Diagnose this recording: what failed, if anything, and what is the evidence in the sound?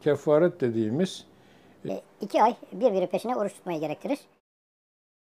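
From 1.89 s to the end, the audio plays back as a section at the wrong speed: everything runs about 1.53 times faster and rises roughly seven semitones, with tempo and pitch jumping together at that instant. That locked pairing rules out a pitch shifter or time-stretch, which would move one without the other. The likely cause is at the editing or playback stage, where this stretch was rendered against the wrong sample clock.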